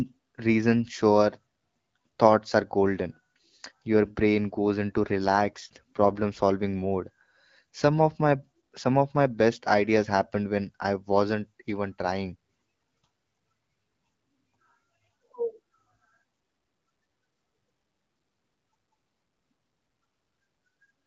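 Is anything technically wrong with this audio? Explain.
Yes. From 5.04 to 6.24 s there is an AMR rate drop: the link steps the AMR-WB codec down, which fits a fall from 12.65 to 8.85 kbit/s, leaving fewer bits for the voice model. The bandwidth holds and nothing cuts out, but the speech turns rougher and more synthetic, then clears once the rate recovers.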